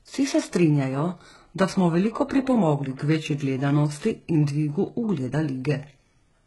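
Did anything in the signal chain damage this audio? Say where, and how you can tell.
Yes, at the codec stage, throughout the speech. The sibilants sound gritty and lispy, the upper range has a metallic sheen instead of natural air, and nothing reaches above 11.5 kHz. This is likely HE-AAC compression at a heavy setting, consistent with a bitrate near 12 kbps. The codec keeps only the lower band and rebuilds the treble by copying lower bands upward under a coarse envelope, so the upper harmonics no longer line up with those below.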